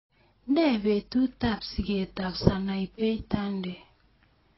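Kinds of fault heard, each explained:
AAC compression: throughout, the speech stops at 5.6 kHz and sounds dull and heavily smeared, likely from AAC-LC coding at a bitrate near 19 kbps.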